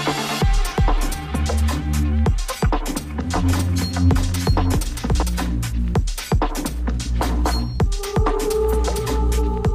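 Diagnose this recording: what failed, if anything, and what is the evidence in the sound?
From 3.35 to 5.23 s, a doubled audio track: an equally loud, dry copy trails by roughly 0.7 s, starting and stopping abruptly, likely from a second, slower capture path.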